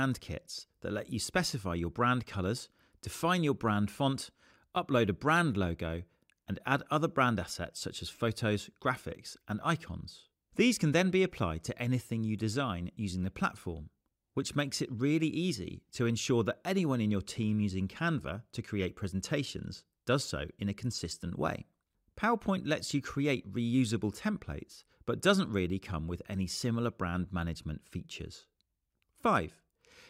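No technical fault can be heard anywhere in this audio. There is nothing to place on a timeline.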